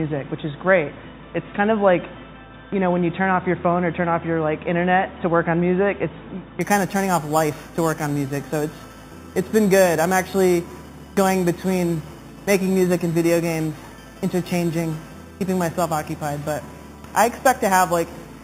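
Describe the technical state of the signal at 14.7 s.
At 14.7 s the audio carries imaging from sample-and-hold upsampling, running from 6.61 s to the end. Each sample was repeated from 8 kHz to 48 kHz without smoothing, leaving mirrored copies between 4 kHz and 8 kHz at about 17 dB below the signal. Unlike steady hiss, this metallic fizz rises and falls with the sound, and its lowest copy moves against the pitch.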